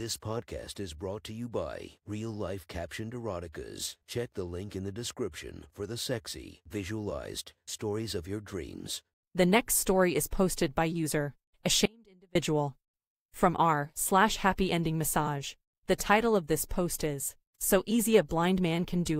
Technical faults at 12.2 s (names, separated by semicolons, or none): audio dropout to a faint residue